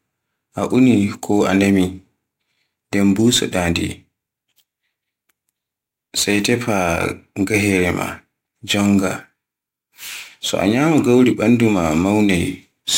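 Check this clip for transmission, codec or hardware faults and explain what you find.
One fault runs through the whole speech clip: crude rate conversion. Samples were dropped or repeated without filtering, which fits a 48 kHz to 44.1 kHz change, leaving an inharmonic fizz roughly 25 dB below the speech. Unlike clipping, it tracks high, loud sounds rather than peaks.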